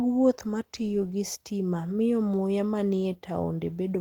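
Nothing goes wrong here at all; the speech comes through Opus voice compression at 24 kbps in hybrid mode with the full band kept, reaching up to about 20.2 kHz, and the coding leaves only a light touch on the sound.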